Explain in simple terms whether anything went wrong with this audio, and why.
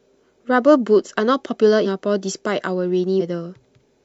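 Twice, the decoder dropped whole chunks of the compressed audio (compressed frames skipped), at 1.81 s and 3.16 s. The speech jumps ahead, losing roughly a third of a second, then a sixth.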